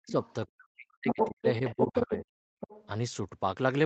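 From 0.0 to 0.15 s the main speech drops sharply, by about 40 dB at its deepest: speech suppressed in double talk. This most likely happens because the echo canceller, hearing both sides at once, turns everything down. Unlike leakage, nothing extra is added; the talker simply fades or goes dull. The same suppression returns across 0.47 to 2.23 s, about a second in total, in broken pieces.

Overlapping this, from 0.09 to 0.46 s, the other side's voice leaks through faintly, about 20 dB below the speech. It is a second voice rather than a loss of the first, and it is likely loudspeaker echo left in the microphone. It is much stronger at 0.94 to 1.46 s and 1.66 to 2.26 s, about as loud as the talker, and it returns at 2.6 to 2.87 s, about 15 dB down.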